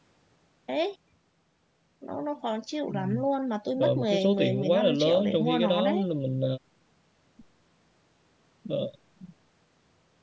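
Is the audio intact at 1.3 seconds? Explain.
Yes, the speech at 1.3 seconds is intact, with no fault at that moment, only the normal call microphone processing that trims the lowest bass and leaves nothing above 8 kHz.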